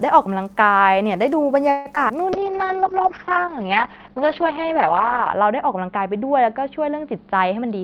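Call audio freeze at 1.71 s to 1.87 s: the speech halts for about 140 ms while the last sound is drawn out as a fading buzz, never dropping to true silence. The likely cause is packets held up in transit, leaving the jitter buffer empty so the receiver had to keep extending what it last had. When delivery resumes, the speech carries on from exactly where it stopped, so nothing is lost, but the call now runs about 140 ms later.

Short concealed packet loss at 1.95 s to 1.98 s: about 20 ms of audio never reached the decoder in time. The receiver papered over the hole by continuing the preceding sound, pitched if voiced and as shaped noise if not, for roughly 9 ms, then cross-faded back into the real signal. The result is a brief smear or wobble, and any very short consonant falling in that spot could disappear.

Skip ahead at 2.08 s to 2.11 s: playback jumps forward with only a tiny bridged gap of around 9 ms. 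Roughly 70 ms of speech is simply gone, enough to clip part of a syllable, because that stretch was discarded while later audio was already queued. The two sides are stitched almost directly together, and the overall delay shrinks by about 50 ms.

Call bitrate drop from 2.34 s onward: the audio bandwidth narrows from 20 kHz to 6 kHz, so the speech loses its air and sibilance and turns muffled, with a rough, watery texture. This fits the encoder being pushed from around 32 kbps down to about 7 kbps after the bandwidth estimate collapsed. The coarsest stretch lasts about 2.9 s, and the upper frequencies stay missing to the end.

Jitter buffer slow-down at 2.40 s to 3.56 s: the speech runs at about 95% speed but keeps its normal pitch, so sounds feel stretched. The receiver was rebuilding its reserve by repeating individual pitch periods and slivers of pauses again and again, inserting about 68 ms in total. 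Because this overlaps the bitrate drop, the drawn-out sounds also come through muffled.

Jitter buffer speed-up from 7.62 s to the end: the speech runs at about 117% speed at unchanged pitch, giving a hurried, compressed feel. The buffer held more audio than its target, as happens when a backlog of packets lands at once, so the receiver trimmed short pieces one or a few pitch periods long, many times in a row. About 40 ms is removed this way.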